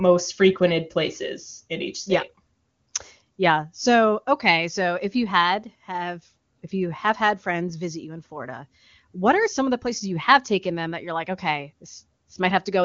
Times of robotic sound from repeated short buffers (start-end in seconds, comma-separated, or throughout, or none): none